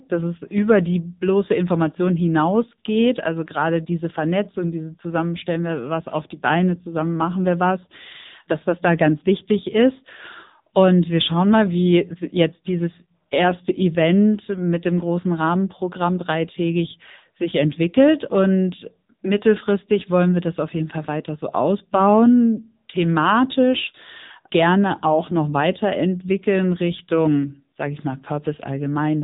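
AMR narrowband mobile codec damage runs through this whole speech clip: nothing passes above 3.8 kHz, and plainly audible buzzy, synthetic coding points to a low rate near 8 kbps.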